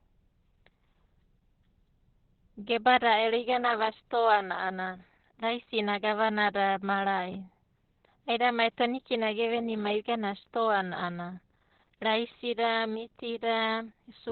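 Opus voice compression runs throughout: the SILK coder at a low rate, which fits 8 kb/s, cuts everything above 4.3 kHz, leaving the speech muffled, hoarse and slightly robotic.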